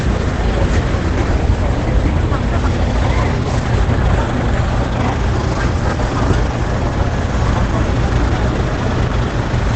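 Opus compression damage runs through this sound recording from start to finish: it is muffled and hoarse, with nothing above 8.7 kHz. This is likely Opus in its SILK speech mode at wideband, which fits a low rate around 12 kbps.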